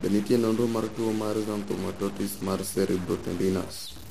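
From start to finish, the speech carries a distortion that rides on the waveform itself, and the pauses between phrases are filled with noise rather than falling silent. The likely cause is a stuck bit, one data bit held fixed at 0 or 1 by a broken line or converter. Roughly half of all sample values then land wrong by that bit's weight, and near zero the error flips with the signal's sign, which produces the noise in the gaps.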